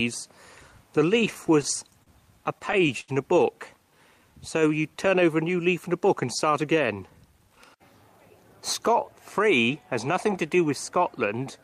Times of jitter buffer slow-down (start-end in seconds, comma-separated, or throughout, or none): 3.90-4.96